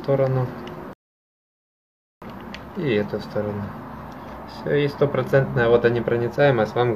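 At 0.93 s the playback falls silent until 2.22 s, a rebuffering stall: the player exhausted its downloaded audio and waited for more data. The sound then resumes exactly where it stopped, losing nothing but adding about 1.29 s of dead air.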